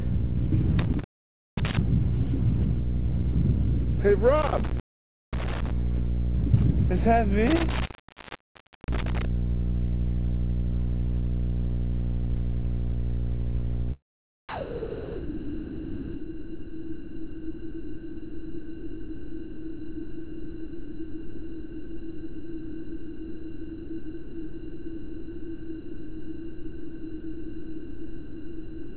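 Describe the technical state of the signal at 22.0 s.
At 22.0 s the original sound is absent: from 14.49 s to the end, about 14.5 s, it gives way to a steady comfort-noise bed, band-limited to 4 kHz by the call path. The likely cause is sound dropped by the voice detector, which treated the signal as background and stopped transmission.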